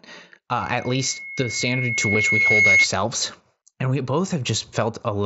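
From 0.61 s a single tone at 2.2 kHz swells over about two seconds into a piercing squeal, peaking roughly 10 dB above the speech before stopping at 2.87 s. This is loudspeaker feedback squeal: the microphone is hearing its own loudspeaker, and at that frequency the loop gain tops one, so the tone keeps feeding itself.

At 2.13 s, under the squeal, there is a brief smooth patch where the sound carries on without a visible break. This is concealed Bluetooth headset packet loss, a gap of about 15 ms, which fits two lost headset frames, filled in by repeating the closest-matching piece of the preceding waveform.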